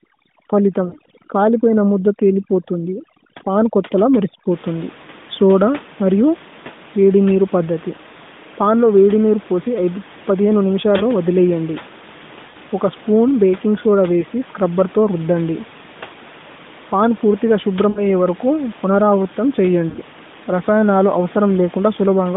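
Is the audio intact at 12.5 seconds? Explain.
No. From 12.50 to 12.56 s the speech smears into a short, drawn-out warble and dips before returning briefly rough. These are lost AMR speech frames: about 40 ms, fitting two 20 ms frames, failed their checks, so the decoder repeated the last good parameters at falling gain.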